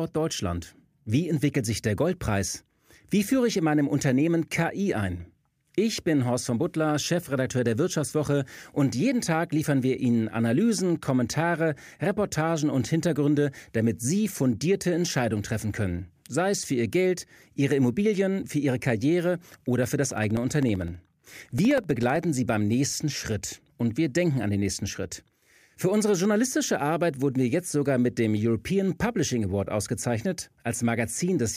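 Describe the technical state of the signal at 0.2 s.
At 0.2 s the speech signal is intact, with no dropout, clipping, glitch or other fault at that moment.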